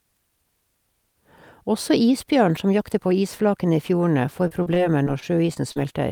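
From 4.47 to 5.78 s, repeated packet loss (robotic sound): seven short dropouts, the longest 39 ms, patched by repeating prior sound, giving choppy speech with pieces missing rather than clean silent gaps.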